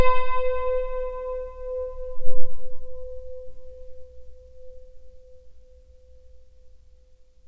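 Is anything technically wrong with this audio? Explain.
No, nothing is technically wrong.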